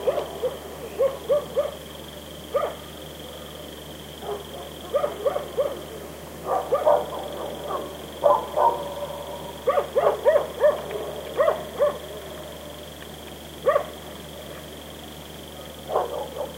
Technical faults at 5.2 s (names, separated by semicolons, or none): video or display buzz